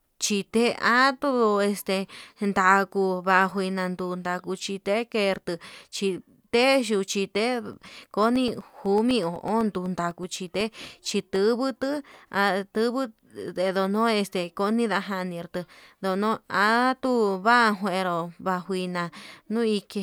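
A speech clip with periodic USB or driver dropouts from 7.73 s to 11.36 s. Every 0.125 s, roughly a millisecond of audio drops to silence. The result is a steady tick, eight per second, around thirty in all. A blocked bus or driver causes each gap.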